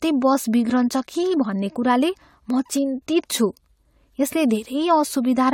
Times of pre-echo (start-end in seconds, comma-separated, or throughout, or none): none